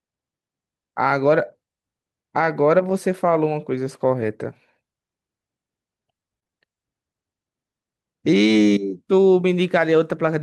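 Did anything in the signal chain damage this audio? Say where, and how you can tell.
Yes. Network stage: four lost packets rebuilt from error correction, at 1.37, 3.29, 4.21 and 8.80 s. Each 20 ms low-bitrate copy sounds rough and noisy but leaves no gap.

Short concealed packet loss, also from the network, clusters over 6.39 to 6.52 s, with further events at 6.44 and 6.47 s. The decoder extrapolates the last sound, which adds a smear or wobble rather than noisy copied audio.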